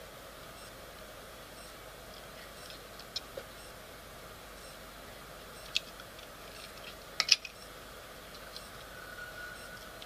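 No technical faults can be heard anywhere in the audio.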